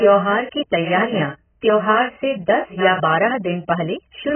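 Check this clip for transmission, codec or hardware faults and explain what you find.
There is one fault, present throughout: heavy AAC compression. The speech sounds dull and muffled, with nothing above about 3.1 kHz, and it carries a smeared, warbling, fizzy texture on sustained sounds and sibilants. The likely cause is an AAC-LC encoder starved of bits, consistent with a very low rate of around 10 kbps. With so few bits, the encoder lowers its cut-off and quantises each frame's spectrum coarsely, leaving gaps the ear hears as that swirling, watery grain.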